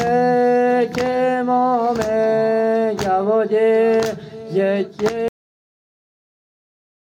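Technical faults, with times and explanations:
5.28 to 7.18 s, cut-off end: the sound stops mid-event at 5.28 s and falls straight to digital silence for the last 1.9 s, with no decay or reverb tail. Unlike a fade-out or natural ending, the final buffers were simply never written or played.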